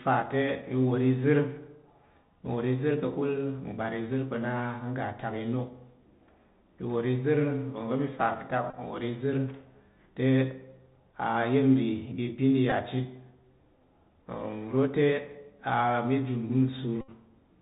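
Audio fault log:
throughout: Bluetooth CVSD headset codec. Audio stops at 4 kHz, s sounds turn scratchy and a granular hiss runs underneath, which fits the 64 kbps one-bit headset codec.
8.70–8.76 s, 12.70–12.72 s, 17.01–17.10 s: Bluetooth headset packet repeated. The last good packet got replayed in place of lost ones every 3.75 ms, giving a short buzz near 267 Hz. The first lasts about 26 ms, the second 15 ms, and the last 71 ms.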